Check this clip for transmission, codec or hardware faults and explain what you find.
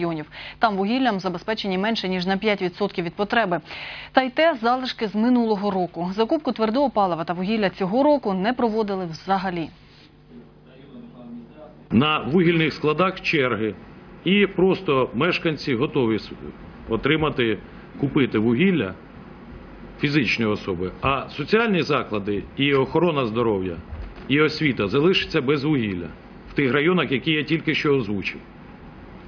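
Nothing stands out here; I listened all the way through and heard no problems.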